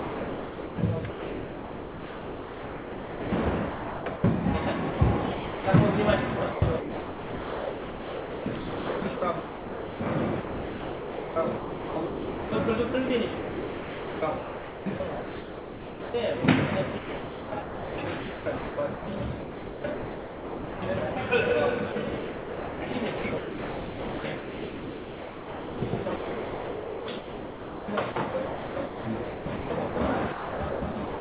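Sound chopped by the voice detector, likely from the sender's voice activity detection, runs through 0.00–4.24 s, 4.90–5.64 s, 6.52–16.14 s, 16.98–21.16 s and 21.92–31.20 s, with about 3.4, 0.4, 7.1, 2.9 and 6.3 s of real sound swapped for synthetic comfort noise. Unlike packet-loss concealment, these gaps hold comfort noise with no stretched or repeated sound. The band stops at 4 kHz, which fits a narrowband call codec such as G.711 mu-law.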